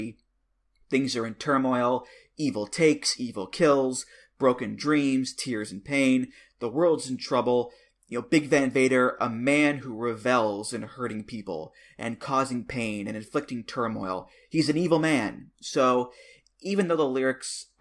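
No faults detected anywhere in the speech recording.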